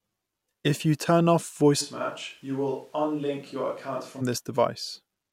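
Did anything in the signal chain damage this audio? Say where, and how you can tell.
Yes. At the capture stage, the close microphone's feed appears to drop out from 1.83 s to 4.20 s, and the recording falls back to a more distant pickup, likely a camera or room microphone. This is a switch to a distant microphone. The speech abruptly turns roomy and hollow, loses low end, and sits about 5 dB quieter. Room noise rises to a bed about 35 dB below the speech. At 4.20 s the close sound snaps back just as suddenly.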